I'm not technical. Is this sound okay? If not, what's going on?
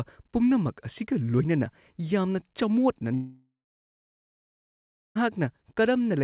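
No. From 3.14 to 5.17 s the speech drops out: a brief fading buzz, then silence, and part is lost. This is likely a long network dropout.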